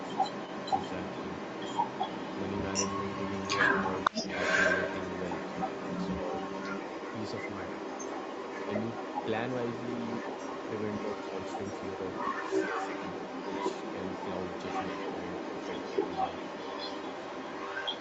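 Speech with an echo leak running the whole way through, from 0.0 to 18.0 s. A delayed copy of the speech trails the original by about 0.47 s and is about 5 dB louder than the direct sound. The likely cause is a far end on loudspeaker whose echo canceller failed to remove the returned audio. The call microphone processing band-limits the sound to nothing above 8 kHz.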